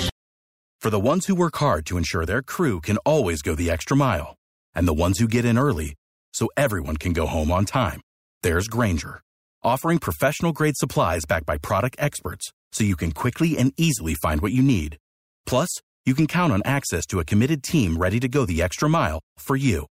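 Nothing goes wrong anywhere in this stretch of speech, so there's no fault to point to at any moment.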